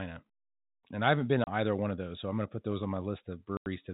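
At 1.44 s, after "I haven't been", the speech drops out for 30 ms. This is packet loss filled with silence. Missing audio was replaced with nothing, leaving hard edges. A second gap at 3.57 s, after "put those on my", lasts 90 ms. That fits three lost 30 ms packets. The band stays telephone-narrow throughout.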